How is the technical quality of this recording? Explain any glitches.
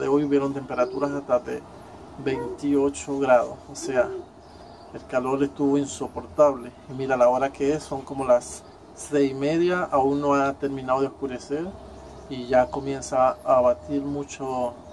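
No technical faults are audible.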